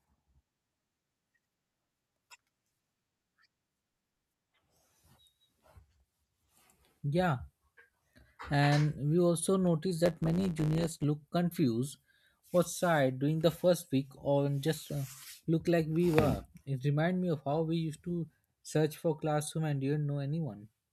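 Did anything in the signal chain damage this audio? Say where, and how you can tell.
Yes. From 10.05 to 11.04 s, right after "we also noticed" and ending before "look confused was tired", the speech picks up a steady 100 Hz buzz and hurries forward about 1.07 times faster while keeping roughly its normal pitch. That combination points to a block size mismatch (truncated) at the driver or buffer stage. One stage writes blocks, fitting a 512-sample size, that are longer than the next stage reads. The tail of each block is discarded, which causes the regular buzz and the shortened timeline.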